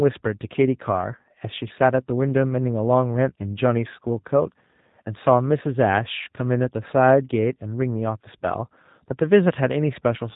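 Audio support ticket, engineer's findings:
G.729 codec (G.729A variant) in the voice path, whole clip. Speech rebuilt from a vocal tract filter, pitch predictor and sparse pulses per 10 ms frame, consistent with an 8 kbit/s low-rate link. Result: nothing above 3.8 kHz, dull and boxy top end. Plainly audible rough, synthetic texture.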